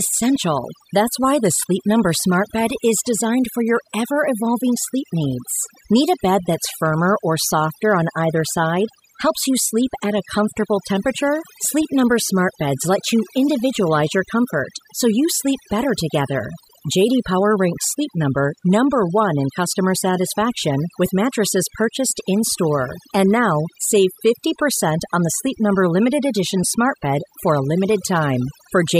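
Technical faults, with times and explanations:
Throughout, overdone noise removal: the noise reduction on this speech is set far too hard, so any frequency band that sits close to its noise estimate gets pulled down or switched off entirely. Quiet parts of the voice fall below that threshold and vanish along with the noise. The gaps between phrases drop to near silence sprinkled with twinkling specks.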